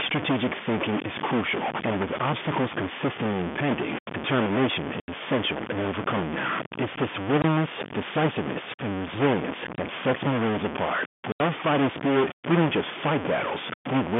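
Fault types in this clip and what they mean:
Stuck bit: There's a distortion riding on the speech the whole way through, and the pauses don't go quiet but fill with a rough noise floor. That points to a stuck bit, likely one data bit jammed at 0 or 1 from a faulty line or converter. Roughly half the samples land off by that bit's weight, and near zero it flips with the waveform's sign, so the noise sits in the gaps.
Packet loss filled with silence: Four hard dropouts cut into the speech, at 5.00 to 5.08 s and 11.32 to 11.40 s (80 ms each) and shorter ones at 7.42 s and 9.76 s (20 ms each). The audio just stops and restarts with hard edges, which is packet loss filled with silence. The lengths fit 20 ms packets, with runs of four lost in the longer holes. The telephone-band G.711 coding underneath is working as expected.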